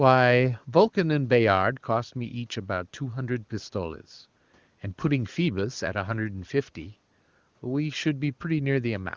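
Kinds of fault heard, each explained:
No faults are audible anywhere in this recording.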